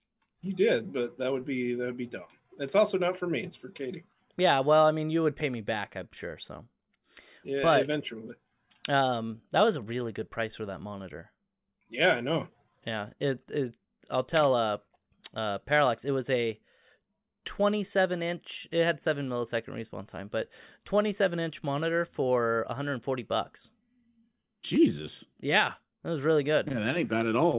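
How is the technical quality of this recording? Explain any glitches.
The recording is technically sound, with no glitches audible at any point in the signal.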